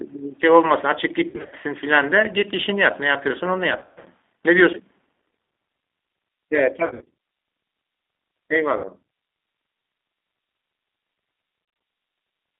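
From start to finish the speech carries the sound of the G.729 codec: slightly rough, synthetic and band-limited to about 300 Hz to 3.6 kHz, which points to an 8 kbit/s G.729A link. A spectrogram shows a hard empty region above 3.6 kHz and thinned low end.

Packet loss concealed by the speech codec occurs at 1.30–1.54 s, 3.79–4.07 s, 6.86–7.10 s, 8.77–8.89 s and 11.65–11.81 s. The decoder stretched its last pitch and filter, so the speech turns into a buzzy tone or a coloured noise that fades. The worst case is at 3.79 s, with a continuous gap of about 130 ms. On a spectrogram these appear as frozen, smeared harmonic stripes with decaying energy. In the waveform they look like shrinking, oddly regular cycles.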